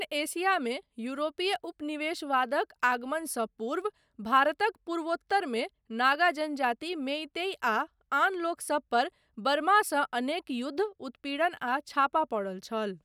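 Nothing stood out on listening to this recording.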